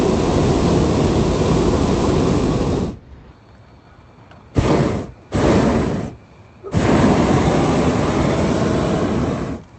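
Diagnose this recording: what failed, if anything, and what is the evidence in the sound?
Nothing failed here: the everyday sounds come through the call path as expected, with the top end stopping at about 8 kHz, which fits a wideband Opus setting, and nothing in the sound points to trouble at any stage.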